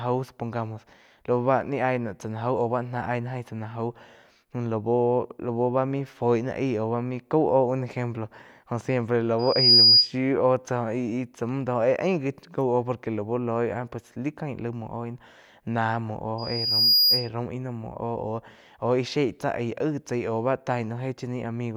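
At 9.39 s a loudspeaker feedback squeal breaks in. A microphone is hearing the loudspeaker it drives. At 4.9 kHz the loop gain tops one, so that tone feeds on itself. It swells in about a third of a second to a piercing whistle, roughly 10 dB above the speech. It stops at 10.11 s. The same 4.9 kHz squeal returns from 16.38 s to 17.29 s. This time it grows more slowly, over most of a second.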